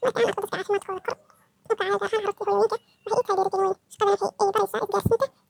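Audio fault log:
Throughout, audio read two samples at a time (double speed): the speech runs twice as fast and a full octave higher, 12 semitones, because pairs of samples were taken as single frames.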